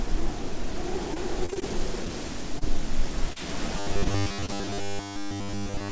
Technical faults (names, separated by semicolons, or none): repeated packet loss (robotic sound); short concealed packet loss; robotic sound from repeated short buffers; short stall from a late packet